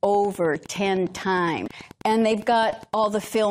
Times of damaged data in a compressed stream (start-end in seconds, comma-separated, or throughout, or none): 1.66-1.68